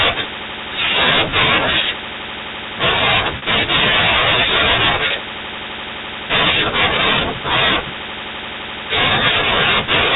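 At 3.38 s the speech briefly freezes into a held, buzzy tone for about 40 ms, and at 5.08 s a shorter 20 ms version of the same hold occurs. Both are packet loss with pitch repetition: audio went missing in transit, which fits two 20 ms packets and then one, and the receiver filled each gap by looping the last pitch period until real speech resumed, through the band-limited G.711 telephone coding.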